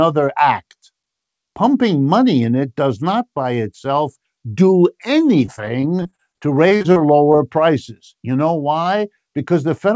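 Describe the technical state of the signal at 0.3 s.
At 0.3 s the speech is intact, carried through the WebRTC call path with its G.722 coding, which leaves nothing above 8 kHz.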